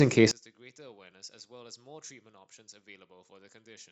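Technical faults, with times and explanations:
0.31–3.92 s, one channel inverted: one stereo channel has likely had its polarity reversed, so when the two are summed to mono the centred speech they share cancels, dropping the level by about 33 dB and leaving only a faint residue to the end.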